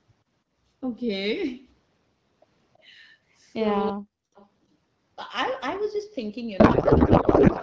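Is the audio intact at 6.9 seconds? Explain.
No. At 6.9 s the audio sits inside a codec payload misread running from 6.59 s to the end at 7.62 s: octet-aligned AMR frames are being parsed as bandwidth-efficient, so every field lands in the wrong place and the speech collapses into garbled noise and warble that barely tracks it.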